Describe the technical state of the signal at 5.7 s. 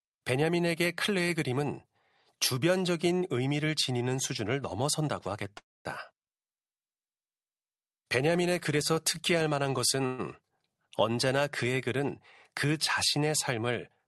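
At 5.7 s the speech sits inside a call audio freeze from 5.57 to 5.87 s, likely from delayed packets draining the jitter buffer. The last sound smears briefly, then about 230 ms of silence follows. Unlike a dropout, speech resumes exactly where it stopped, nothing lost, just 278 ms later.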